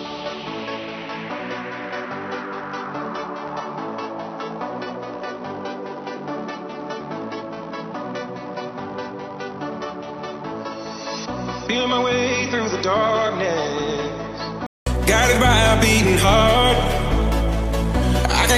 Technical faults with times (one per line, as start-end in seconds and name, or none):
0.00-14.86 input switched to a poorer device